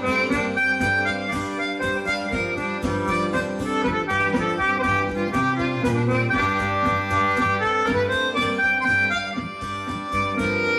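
Nothing stood out as a technical fault on listening.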